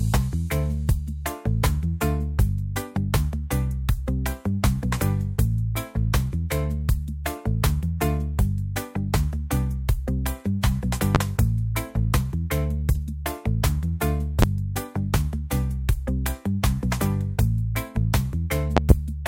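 A loud pop strikes at 11.15–11.18 s and again at 14.42–14.46 s, each a single sharp thump about 25 dB above the sound, which carries on underneath. A softer double pop follows at 18.77–18.93 s. Likely cause: voltage steps from a plug, switch or static.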